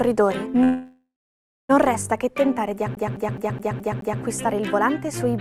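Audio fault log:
0.63–1.71 s, call audio freeze: packets likely stalled and emptied the jitter buffer, so the last sound stretches into a fading buzz or hiss, then 0.62 s of silence, and resumes with nothing lost.
2.95–4.22 s, CD stuck on one turn: a scratch throws the laser back a track every rotation, so one 0.21 s stretch repeats six times with brief mutes, a fast even stutter.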